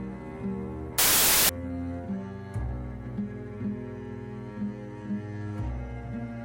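From 0.99 to 1.49 s the sound collapses into loud, harsh noise with the original only faintly audible beneath it, slowed to about 0.75 times its speed and lowered in pitch. This is a wrong sample width fault: the pattern suggests 32-bit samples were read as packed 24-bit ones, so most values mix bytes from neighbouring samples. Unlike a byte-order swap, which keeps speed and pitch intact, the misaligned framing also slows and lowers the sound.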